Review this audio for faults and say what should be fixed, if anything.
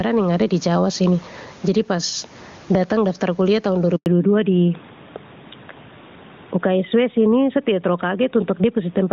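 Gain pumping runs throughout: the room noise swells by around 15 dB in pauses and ducks under loud speech, likely from input gain set too high into a fast limiter. Unlike steady compression, the background itself breathes. Lowering microphone gain so the limiter rarely engages prevents it.

A handover gap silences the speech from 3.96 to 4.06 s, a 100 ms dropout with a quick fade rather than the crackle of packet loss. Prompt, well-tuned network handover prevents it.

Fallback to narrowband starts at 4.06 s: everything above 4 kHz disappears, pointing to a drop from AMR-WB to AMR-NB. The dullness persists rather than recovering like a passing bad patch. Keeping HD Voice negotiated across the new network prevents it.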